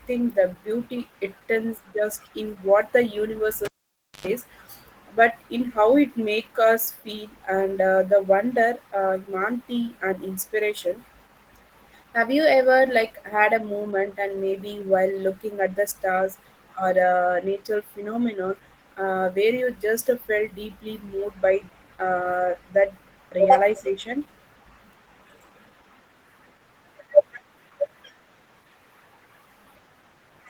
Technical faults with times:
0.00-30.49 Opus voice compression
3.65-4.27 cable pulled and plugged in

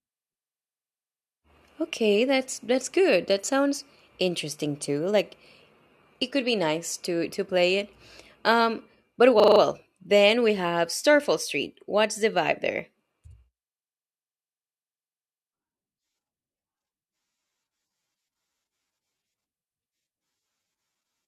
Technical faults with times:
9.40-9.60 system hang loop

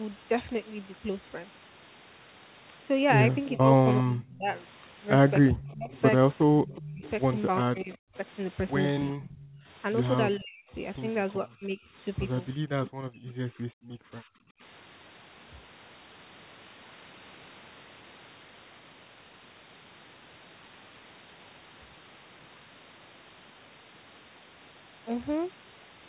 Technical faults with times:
3.49-4.29 echo leak
3.58-4.51 speech suppressed in double talk
5.51-8.15 speech suppressed in double talk
5.61-7.97 echo leak
9.12-14.61 speech suppressed in double talk
9.36-9.63 echo leak

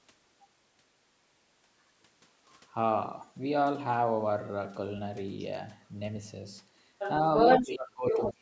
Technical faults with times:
6.98-7.11 other side's voice leaking through
7.36-7.69 other side's voice leaking through
7.61-8.41 speech suppressed in double talk
8.10-8.32 other side's voice leaking through

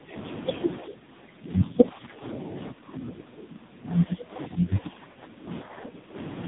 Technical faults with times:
0.00-6.48 AMR narrowband mobile codec
0.00-0.13 speech suppressed in double talk
0.81-6.16 speech suppressed in double talk
5.12-5.18 lost AMR speech frames

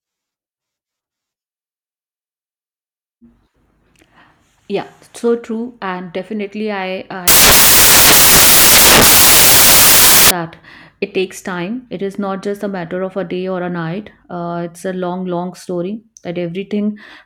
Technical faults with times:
7.28-10.31 samples built from the wrong bytes

